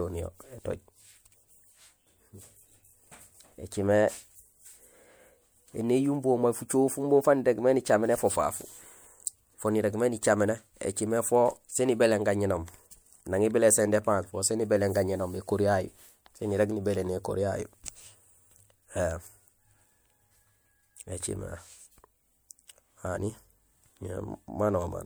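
Speech, with one pre-echo at about 9.26 s: a hiss of roughly 13 ms smears in just ahead of a sharp onset. Transform-codec quantisation noise has spread backward across the block. Unlike room echo, the artefact comes before the attack, never after.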